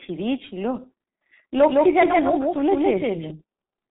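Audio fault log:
Throughout: G.723.1 codec. Nothing above 3.8 kHz, with heavily hoarse, smeared consonants from coarse 30 ms frames, unlike a plain low-pass filter; fits about 6.3 kbit/s.
1.69 to 3.31 s: doubled audio track. An equally loud full-band copy trails by about 150 ms and starts and stops abruptly with no decay, unlike echo. Likely a second, slower capture path.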